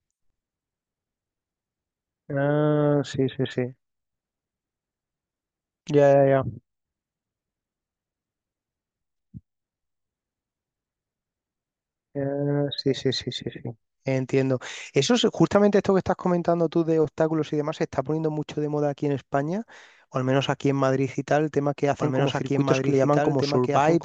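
At 21.99 s a doubled audio track begins and runs to the end: a second full-band copy of the speech, trailing by roughly two seconds and about 5 dB quieter, cuts in abruptly with no decay or room colour, likely from a slower capture path.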